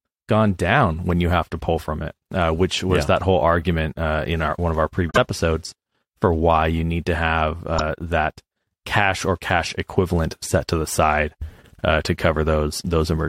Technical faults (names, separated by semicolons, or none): damaged data in a compressed stream